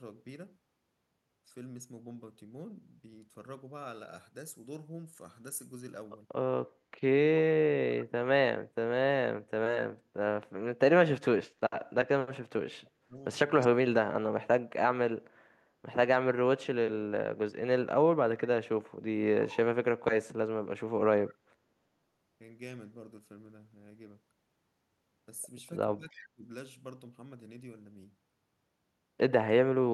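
From 12.81 to 13.24 s the speech dips sharply, falling by around 35 dB at its deepest for roughly 400 ms. This is speech suppressed in double talk, likely caused by an echo canceller that heard both ends talking at once, could not tell the near talker from the loudspeaker echo, and attenuated everything. The same deep, gated loss returns from 14.13 to 14.92 s, affecting about half a second of speech.

Between these, from 13.6 to 13.68 s, a brief faint scrap of voice arrives 318 ms after the original, about 25 dB below the speech. That is echo leak: one side on loudspeaker whose canceller likely let some of the microphone pickup through and sent it back as a delayed copy.

At 26.1 to 26.18 s a quieter echo leak scrap, about 30 dB down and again 318 ms late, coincides with another suppression dip. That dip runs from 26.1 to 26.47 s, with the same drop of around 35 dB over roughly 400 ms.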